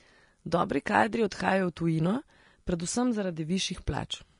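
Throughout the speech, the treble carries a grainy, hissy texture, consonant onsets sound smeared, and nothing is present above 10.6 kHz. This is likely Vorbis compression at a low setting, consistent with roughly 36 kbps, where coarse quantisation of the upper residue turns fine detail into noise.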